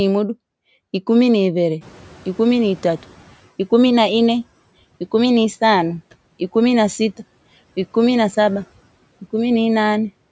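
Speech, where the background noise jumps by about 19 dB around 2 s and the noise suppressor is caught out. From 1.81 to 3.42 s the louder noise passes with little reduction, then sinks by about 10 dB as the estimate adapts over 1.61 s. A spectrogram shows a broadband noise floor brightening, then fading back, with nothing above 8 kHz.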